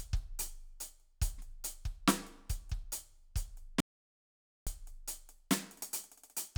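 At 3.80 s the music cuts off abruptly into silence, with no room tone or decay, and resumes mid-flow at 4.67 s, about 0.86 s later. This is an audio dropout to silence, likely from the input signal being lost while the recorder kept writing silence.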